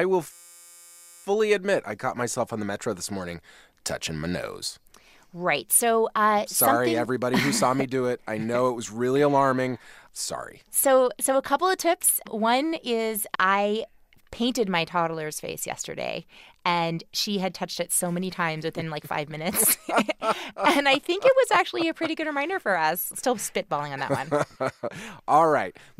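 A system hang loop from 0.33 to 1.24 s recycles one 5.8 ms buffer into a steady 172 Hz buzz before "admit I caught myself".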